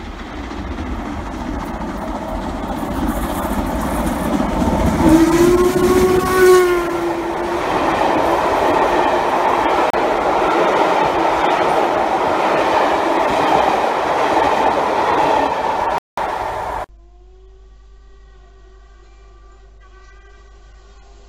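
A digital broadcast dropout occurs twice: the receiver lost valid frames and muted until clean ones resumed. The audio cuts to silence from 9.90 to 9.94 s, fitting one lost frame, then from 15.98 to 16.18 s, fitting about six, and whatever was sent during those gaps is gone.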